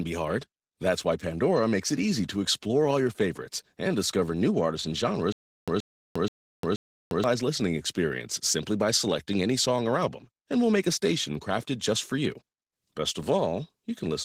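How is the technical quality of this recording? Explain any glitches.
The recording has two problems: codec damage throughout and one stutter in the middle.

Opus voice compression runs the whole length of the speech. At 16 kbps the encoder is in hybrid mode, using SILK's linear-prediction coding for the lower band and a CELT layer above 8 kHz, so the fullband range is kept. With so few bits, the excitation signal is coded coarsely in 20 ms frames. The resulting damage is plainly audible as a processed, codec-coloured texture on the voice.

A stutter with silent gaps occurs from 5.32 to 7.24 s. A 126 ms fragment plays, then about 352 ms of digital silence follows, and the cycle repeats every 478 ms, four times. The likely cause is a stalled player or stream replaying its last buffered fragment on each retry before running empty. The audio that should have filled that span is lost.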